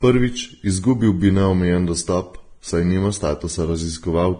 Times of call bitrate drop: none

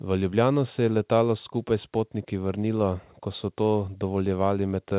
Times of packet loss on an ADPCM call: none

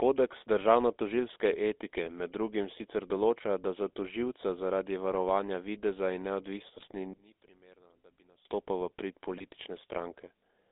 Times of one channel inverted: 7.13-8.45

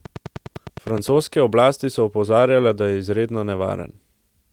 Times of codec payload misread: none

